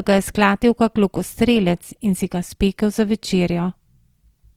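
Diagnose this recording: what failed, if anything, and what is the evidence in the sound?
Codec stage. Throughout the clip the speech sounds grainy and rough, its tonal parts turned noisy. This is likely Opus compression in its music mode, which fills starved bands with folded or noise content. The damage fits roughly 24 kbps. Bandwidth stays full, reaching 20.3 kHz.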